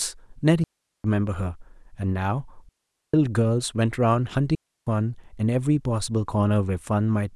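Clean holes of near silence cut the speech at 0.64–1.04 s, 2.69–3.14 s and 4.55–4.87 s, with no noise bursts: a digital wireless dropout, where the receiver muted after losing too much data.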